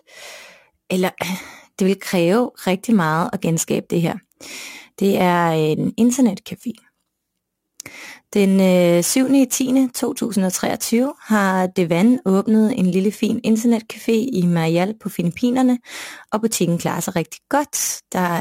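A speech recording carrying a crude rate conversion from start to finish: samples have been dropped rather than filtered, consistent with a 48 kHz to 44.1 kHz change done by simple nearest-sample picking. The irregular skipping adds a gritty, inharmonic fizz, roughly 25 dB below the speech, that rises and falls with loud and sibilant passages. Unlike hiss or dither noise, it vanishes in pauses, and its tones bear no harmonic relation to the voice.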